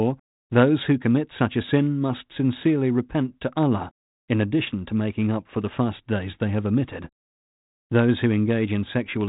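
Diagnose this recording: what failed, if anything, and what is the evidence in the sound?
Nothing failed: the speech passes through a G.726 path at 32 kbit/s, which accounts for the band limit near 3.8 kHz and the light coding texture, and neither sits outside what that codec does by design.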